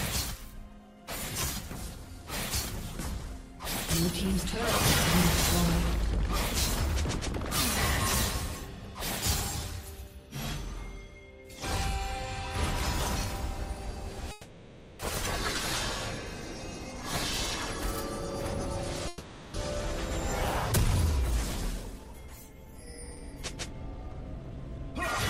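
At 14.31 s the sound stops moving forward and stretches into a fading buzz or hiss until 15.01 s. This is a call audio freeze, likely from delayed packets draining the jitter buffer. About 680 ms is filled in. Nothing is lost. The audio resumes where it paused. From 16.64 to 17.02 s a jitter buffer speed-up follows. Short pitch-period pieces are cut repeatedly to shrink the backlog. Playback runs at 119% with unchanged pitch and sounds hurried. A second freeze holds from 19.08 to 19.56 s, filling 460 ms. A longer speed-up runs from 21.74 to 24.94 s at 110%, trimming roughly 300 ms.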